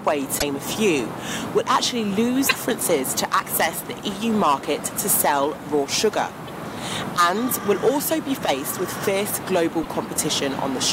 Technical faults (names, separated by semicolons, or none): damaged data in a compressed stream